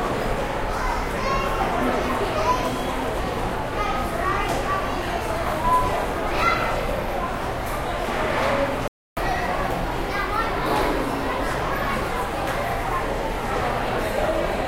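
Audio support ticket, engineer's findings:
Playback stall, 8.88 to 9.17 s: output drops to silence for about 0.29 s mid-sound, then resumes. Likely the player starving for data or its thread being blocked, leaving nothing to output until the buffer refills.

Catch-up at higher speed, 9.17 to 12.08 s: sound runs at 1.1x with pitch raised roughly one and a half semitones. Player resampling its backlog faster after the stall; over this span that wins back roughly the 0.29 s lost.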